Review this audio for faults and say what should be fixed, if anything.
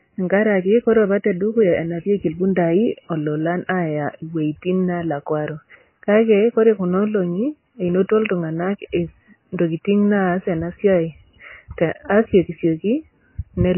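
Likely MP3 compression at a starved bitrate, consistent with something near 16 kbps, runs throughout. The encoder has cut everything above 3 kHz and is switching weak frequency lines on and off between frames, so the speech sounds dull, watery and swirly, with smeared attacks. Encoding at a much higher bitrate, or keeping an uncompressed master, would prevent this.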